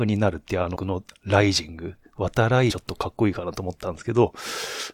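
Damaged data in a compressed stream breaks up this speech three times, at 0.75–0.77 s, 2.70–2.72 s and 4.79–4.81 s. Each time a stretch of the coded stream has been corrupted, so the decoder misreads those frames, loses its place and has to hunt for the next valid frame header before it can resume. Each event is heard as a short glitch of roughly 20 ms.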